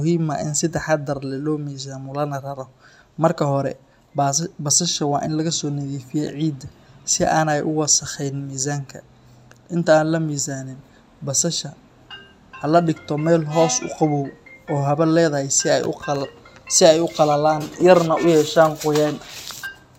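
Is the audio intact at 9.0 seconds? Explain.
Yes, at 9.0 seconds the audio is intact, with no dropout, click, distortion or other technical fault at that point.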